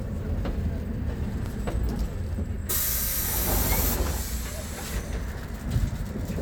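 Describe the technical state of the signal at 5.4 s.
At 5.45 s there is a brief skip: audio missing between chunks. Roughly a few milliseconds of sound drop out. The two sides butt together with no gap. The likely cause is a recorder closing one chunk and opening the next, fitting 2-second chunks.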